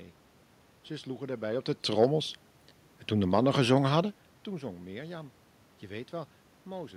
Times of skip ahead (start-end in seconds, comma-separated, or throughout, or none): none